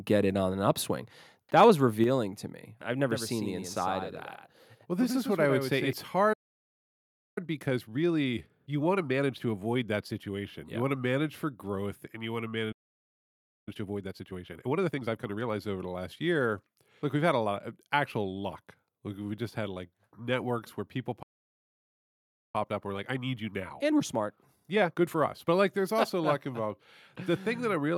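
From 1.57 to 1.64 s the loudest syllable takes on a harsh, crackling edge, the sound of microphone overload. The peaks run about 2 dB past the converter's limit, so a small fraction of samples have their tops sheared flat. The likely cause is a microphone input set too high for the converter, which squares off the waveform and adds the gritty, buzzy harmonics heard on that peak.

Moments later, at 2.04 s, just before "to me I've", the whole sound drops abruptly by about 5 dB, the background along with the speech. This is the microphone volume stepped down. The call software has likely reacted to the distorted peak half a second earlier by cutting the device's input volume in a single step. Because the drop is one jump rather than a fade, it reads as a sudden change of distance.

From 3.11 to 5.93 s the speech takes on a hollow, slapback doubling. A second full-band copy trails the original by roughly a tenth of a second, sitting around 5 dB lower, with no reverb tail or room colour. 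This is a doubled audio track, likely the same signal captured again through a slower path and mixed back in. It switches on and off cleanly at those boundaries, with no build-up or decay.

The speech then cuts out dead in mid-flow from 6.33 to 7.38 s, a gap of about 1.03 s. It happens again from 12.72 to 13.68 s, about 0.95 s, and from 21.22 to 22.55 s, about 1.31 s, right after "like networks where people". Each is a playback stall. The player likely ran short of data or had its thread blocked, so the output went silent until it recovered.

After each stall the speech comes back hurried but at its normal pitch. This is time-compressed catch-up, where the player trims its backlog by removing short slices and cross-fading across the joins. It runs at 1.25× from 7.38 to 10.38 s, at a more noticeable 1.5× from 13.68 to 15.56 s, and at 1.25× again from 22.55 to 25.55 s.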